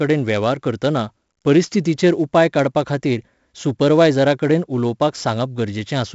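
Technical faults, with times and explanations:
Throughout, 4-bit ADPCM compression: every louder stretch of the speech carries a gritty hiss that rides along with the level, and sharp onsets come out crunched because the codec's adaptive step can't grow fast enough to follow them. The damage here is heavy. Nothing comes through above about 7.7 kHz, which dulls the top end and points to a 16 kHz sample rate, fitting a 64 kbps stream at four bits per sample.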